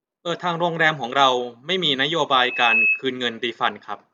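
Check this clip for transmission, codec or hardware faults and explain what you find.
One hardware fault appears in this speech clip. From 2.30 to 3.03 s there is loudspeaker feedback squeal: the microphone re-captures its own loudspeaker, so the loop runs away at 2.6 kHz. It swells over a few tenths of a second to roughly 5 dB above the speech, showing as a bright horizontal line on a spectrogram and a growing envelope in the waveform.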